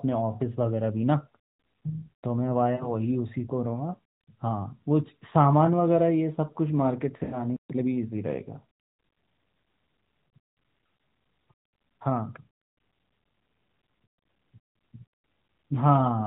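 Lost AMR speech frames at 2.76–2.92 s and 7.24–7.37 s: the narrowband decoder bridged failed frames, about two then four, by repeating the last good pitch and vocal-tract settings with fading gain, so the speech smears briefly, then drops away before recovering roughly.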